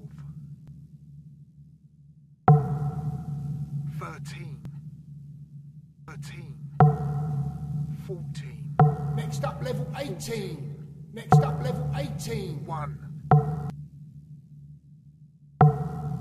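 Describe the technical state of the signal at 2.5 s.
Nothing at 2.5 s points to a fault, and the signal there is intact.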